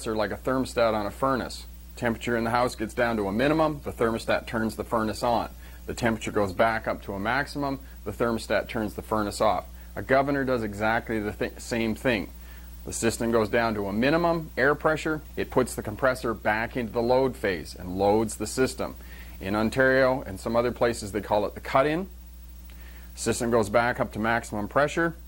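From 2.61 to 6.85 s a call bitrate drop makes the sound coarse, watery and dull, consistent with the encoder falling from about 48 to 15 kbps. Unlike packet loss, nothing drops out or glitches; the sound stays continuous, then clears.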